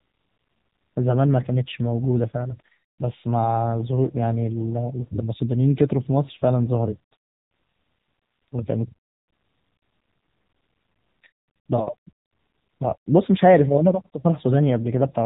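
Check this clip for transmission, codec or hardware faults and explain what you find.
The whole clip has gone through the AMR narrowband mobile codec, start to finish. Nothing above 4 kHz survives, and the vocal-tract model with sparse pulses leaves speech plainly buzzy and synthetic, which fits a lower mode around 8 kbps.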